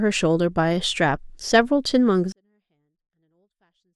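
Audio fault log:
2.32 to 3.95 s: 24-bit alignment error (too quiet). The speech stays clean but drops about 48 dB at once, because 24-bit samples in the low bytes are read as 32-bit values.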